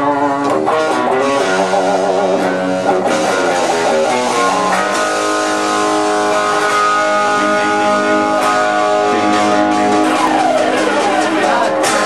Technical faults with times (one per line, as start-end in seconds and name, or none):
1.30 audio missing between chunks
4.29 audio missing between chunks
7.28 audio missing between chunks
10.27 audio missing between chunks